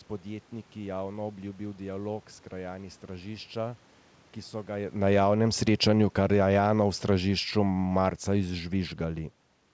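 From 4.95 s to 9.31 s, automatic gain falling pulls the level down by about 8 dB. Speech and room noise sink together, and the waveform envelope tapers steadily. Inside that stretch, from 5.26 s to 5.73 s, automatic gain rising lifts everything by about 4 dB. On the waveform this is a brief bulge, and on the spectrogram the noise floor brightens as well.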